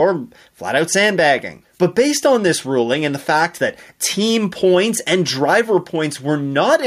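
Throughout the speech, the gain swings up and down with the talker's level, a pumping motion of roughly 5 dB. Loud and quiet passages sit unnaturally close in level, so the whole clip sounds squashed. This is gain pumping. The likely cause is input gain set far too high for the microphone, with a fast limiter or compressor pulling the level down on each loud moment and releasing it in the gaps.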